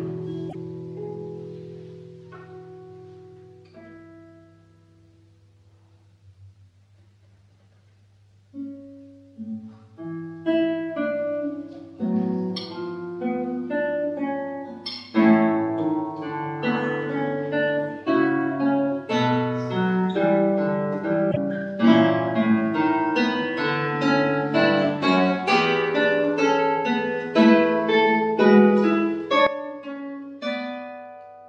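At 0.49 to 0.55 s and again at 21.30 to 21.37 s, the sound skips forward and the gap fills with a brief glitch lasting a couple of frames. This is likely a broken MP3 bit reservoir: after frames went missing, the decoder pulled borrowed bits from the wrong frame. The burst length fits 26.1 ms MP3 frames. On a spectrogram each event is a narrow vertical disturbance, and the waveform shows a discontinuity where the audio jumps ahead.

At 29.47 s the level falls abruptly by about 12 dB and stays down to the end, with the sound and the noise floor dropping together. That points to a sudden gain jump, most likely a digital gain change applied from one sample to the next with no ramp. The waveform envelope shrinks in a single step, and the spectrogram darkens uniformly across all frequencies at that instant, sometimes with a thin vertical click line at the edge.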